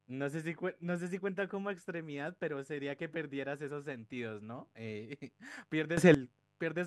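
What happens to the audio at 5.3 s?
At 5.3 s the speech carries mains buzz, present at the same level from start to end rather than appearing there. Sharp switching spikes, of the kind a dimmer, rectifier or missing shield lets in, enter twice per 50 Hz cycle, so energy repeats at 100 Hz and harmonics reach up into the kilohertz range. The result is a raspy, steady edge sitting roughly 40 dB below the voice. Plain mains hum would be a smooth low tone; this buzz is bright and gritty.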